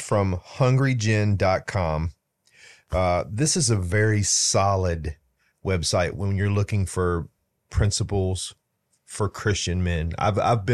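A short speech recording, with no technical fault to be heard anywhere in it. Nothing in the sound calls for a time or a cause.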